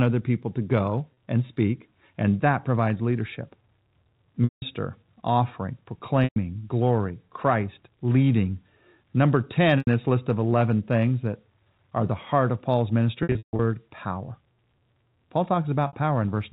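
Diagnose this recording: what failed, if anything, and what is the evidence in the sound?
Network packet loss with pitch repetition at 1.14–1.17, 4.44–4.62, 6.24–6.36, 9.78–9.87, 13.23–13.59 and 15.87–15.93 s. The concealment repeats the last pitch cycle, so short gaps become buzzy held tones. The longer gaps fade out before the speech cross-fades back.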